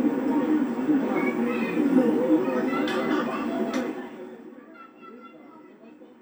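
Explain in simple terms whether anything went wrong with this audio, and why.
From 3.62 to 4.64 s there is zipper noise. The sound gets much quieter, but in small jumps, about ten a second, instead of one smooth slide. Each jump leaves a tiny click, so you hear a faint ticking while the level drops.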